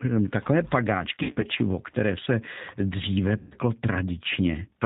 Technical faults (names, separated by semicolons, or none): G.729 codec; VoIP packet loss concealed by the speech codec